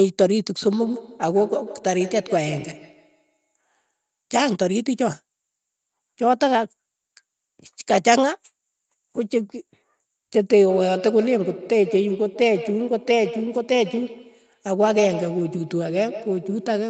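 From 0.69 to 3.54 s, and from 10.7 s to the end, there is feedback echo between two devices. A nearby device replays the sound. This microphone recaptures it. Each sound returns roughly every 150 ms, thin and ringing, about 12 to 14 dB below the speech.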